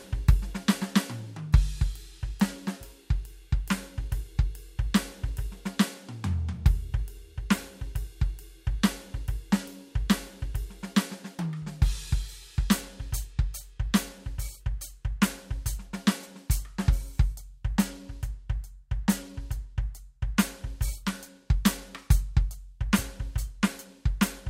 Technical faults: none

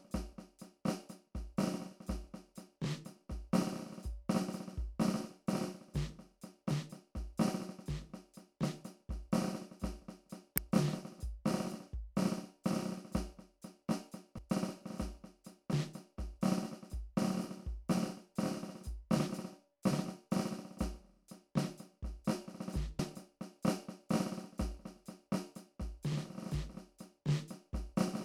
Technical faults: damaged data in a compressed stream

